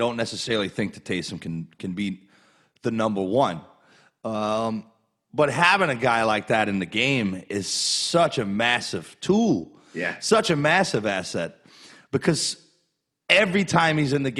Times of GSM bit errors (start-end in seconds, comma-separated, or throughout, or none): none